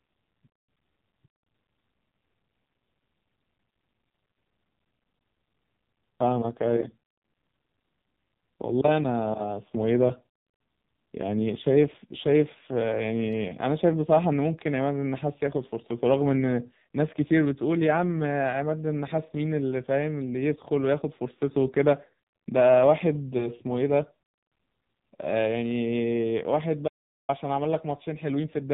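Throughout, the speech carries heavy damage from the AMR narrowband mobile codec. Its buzzy, synthetic texture points to a low mode around 5.9 kbps. A spectrogram shows nothing above 4 kHz, and the vocal-tract model smears harmonics into coarse, blurred bands.

From 23.38 to 23.50 s comes a brief dip or warble from lost AMR speech frames. This fits one missing 20 ms frame, which the decoder bridged by reusing its last pitch and filter settings at reduced gain. The waveform shows a short sag in the envelope, followed by rough recovery.

From 26.88 to 27.29 s the speech cuts out abruptly for about 0.41 s as an audio dropout to silence, likely caused by the input being lost while writing continued. The waveform goes flat, and the spectrogram shows a blank column with no room tone.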